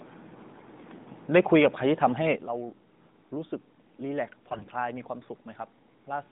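From 0.54 to 0.70 s the speech turns hoarse and gargly. Those are AMR bit errors: flipped, weakly protected bits, roughly 5 percent of them across 8 frames, scramble the fine pitch, gain and pulse values.

At 2.36 s there's a sudden gain jump. Speech and background noise both drop about 12 dB at once and stay down to the end, likely from a gain change applied without a ramp.

From 4.42 to 4.66 s the same scratchy AMR bit-error roughness returns for about a quarter second, heard at the quieter level, while the pitch and loudness hold roughly steady.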